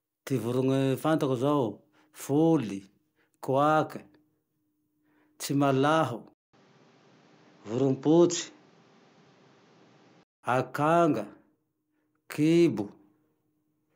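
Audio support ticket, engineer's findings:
Speech turns dull and boxy from 6.33 to 10.43 s, with nothing above 7.6 kHz, a 200 ms gap at the switch and a new faint noise floor, at unchanged level. Likely input switched to a poorer device, a narrower-band mic path, then restored.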